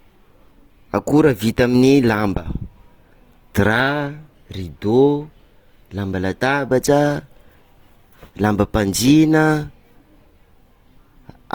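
A speech recording with plainly audible Opus compression throughout: vowel tones sound grainy and rough because starved bands are filled with folded or noise-like energy. That is likely a music-mode encode at a low bitrate, around 24 kbps. A spectrogram shows continuous, speckled texture with few holes, reaching about 20.2 kHz.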